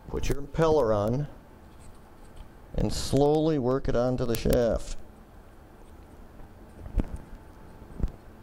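A receiving device running unlocked to the sender's clock, a few hundred parts per million apart, slips a sample about ten times per second, causing word clock ticks from 0.17 to 8.35 s.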